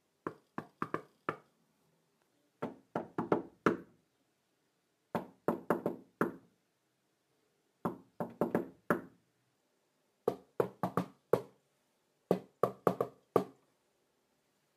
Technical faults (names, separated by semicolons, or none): crude rate conversion